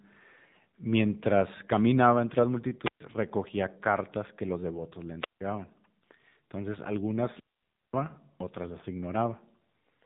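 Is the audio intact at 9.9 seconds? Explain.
No, not really. At 9.9 s you're still hearing the AMR narrowband mobile codec, which runs through the whole clip. It squeezes the speech into an 8 kHz phone channel and rebuilds it from a vocal-tract model fed by a handful of pulses. Nothing gets through above about 3.8 kHz, so it sounds muffled and boxy. The damage is plainly audible: a buzzy, synthetic edge that fits a low mode of around 7.4 kbps.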